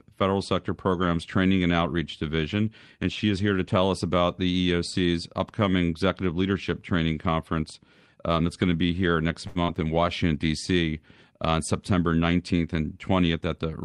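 Right after "to be here next", at 9.47 s, there's a short stall from a late packet. The packet didn't show up in time, so the receiver stretched the last sound for about 80 ms until it arrived. Nothing's lost, but that sound hangs a beat too long and the delay grows by 80 ms.

Just after that, from 9.63 to 9.71 s, comes a burst of packet loss. The receiver papered over about 46 ms with a fading continuation of the last sound, then picked up with roughly 40 ms of audio simply gone, so you hear a brief fading fill and a small jump.

Near the end, from 13.21 to 13.66 s, there's a jitter buffer speed-up. The buffer was holding more than it wanted, so the receiver trimmed out lots of tiny pitch-period slices, about a tenth of a second in total. The audio runs at 117% speed with the pitch unchanged, so it sounds rushed.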